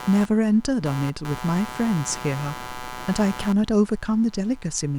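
Running under the whole clip there's computer activity noise, a buzzy, chirping layer pulsing at around 150 Hz and sitting only about 15 dB below the speech. It's the machine's load changes shifting the shared ground, so it tracks the computer's activity, not the talking.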